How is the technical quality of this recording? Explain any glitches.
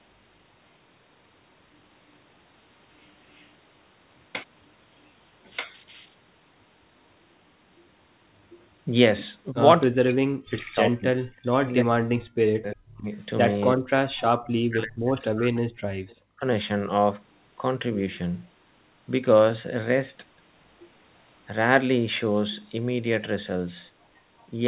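The recording has two recurring call-processing faults, heard over narrowband audio that stops near 4 kHz, which fits a G.711 telephone codec.

Echo leak at 3.3–3.5 s and 16.08–16.16 s: a faint delayed copy of the speech, about 35 and 30 dB down, trailing by roughly a third of a second. This likely comes from a far-end echo canceller letting loudspeaker pickup through.

Speech suppressed in double talk at 9.52–9.57 s, 9.92–13.09 s, 13.74–15.61 s and 16.19–16.48 s: the speech dips sharply, by up to roughly 40 dB, likely because the echo canceller muted the talker while both sides spoke.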